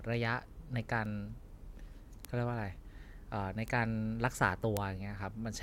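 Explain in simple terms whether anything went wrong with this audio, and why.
Four tiny ticks interrupt this speech at 1.05, 2.25, 3.68 and 4.77 seconds, the last one the sharpest. Each is a bit error spike: a single stored number got one digit flipped, so for one instant the sound jumps and snaps straight back. Unlike a dropout or a skip, nothing of the speech is lost or cut. It's just one isolated tick that has nothing to do with what's being said.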